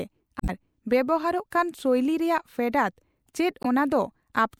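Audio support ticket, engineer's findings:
Damaged data in compressed stream: glitch at 0.38–0.50 s and 3.63–3.66 s. Decoder misreads corrupt frames, resyncs. Spectrogram: broadband smear; waveform: abrupt discontinuity.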